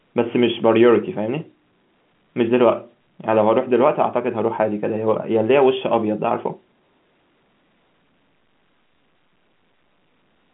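Nothing stood out on listening to this speech, which carries the narrow band of an ordinary G.711 telephone line with no content above about 3.8 kHz.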